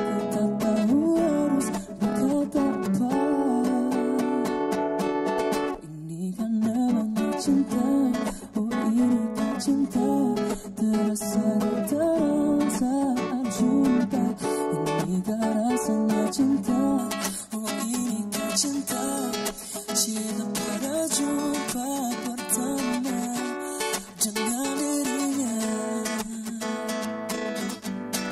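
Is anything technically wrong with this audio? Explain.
Yes. From about 16.98 s to the end, pre-emphasis is left on: treble boosted without the matching de-emphasis, about 11 dB up at 10 kHz, fitting a J.17 curve, so it turns thin, bright and sibilant.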